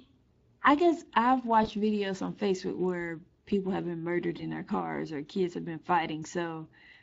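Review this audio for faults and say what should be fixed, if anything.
The whole clip carries Speex codec damage, and it's plainly audible. Speex is a CELP coder, so it rebuilds speech from a filter plus a coded excitation, and here the excitation is short on detail. That leaves the speech with a noisy, hoarse edge on top of everything. It runs at about 20.6 kbps. To prevent it, run a higher Speex quality setting or move to a more modern codec such as Opus at a similar or higher bitrate.

There are two short dropouts handled by VoIP packet loss concealment in the speech codec, at about 1.63 to 1.68 s and 4.37 to 4.43 s. Each sounds like a single lost 20 ms frame. The decoder has bridged the gap by carrying its last pitch and filter forward while turning the level down. You hear the sound stretched and fading, and because each frame builds on the previous one, the voice stays weak or distorted for a moment after the audio resumes. 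To prevent it, add jitter buffering and some forward error correction or redundancy on the network path so single packets aren't lost outright.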